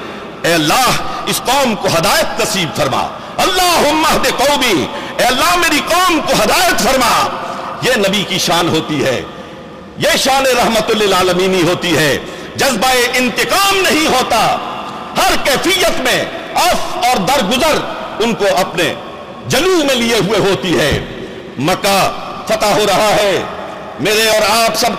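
From 0.76 s to 24.33 s a regular click recurs every 1.12 s, about twenty in all. This is the signature of clock drift buffer slips, likely from two devices whose clocks disagree by roughly 700 ppm, forcing the buffer to drop or repeat a few dozen samples at each slip.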